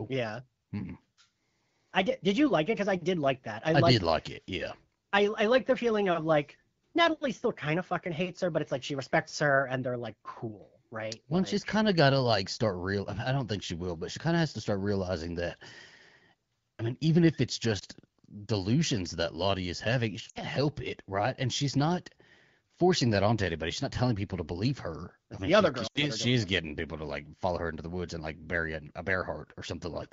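Lost AMR speech frames occur at 17.79 to 17.84 s after "mean even if it's", at 20.29 to 20.40 s between "is having she" and "help it right", and at 25.87 to 26.05 s between "mean the other she" and "she is getting people". The gaps, about 20, 60 and 80 ms, failed their checks, so the wideband decoder repeated the last good pitch and vocal tract settings at falling gain. The first is a brief dip or warble. The longer two drop to near silence within two frames, and the speech returns briefly weak or rough.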